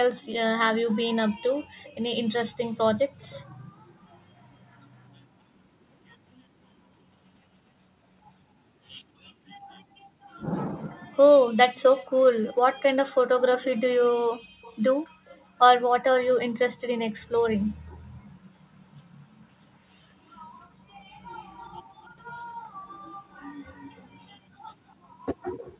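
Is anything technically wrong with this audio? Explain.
Yes. An echo leak: a faint delayed copy of the speech trails it by 253 ms at 3.2 to 4.17 s, then 288 ms at 14.62 to 15.45 s, 20.61 to 22.16 s, and 23.31 s to the end, where it is fainter still. The likely cause is a loudspeaker echo canceller letting its microphone's pickup return down the call.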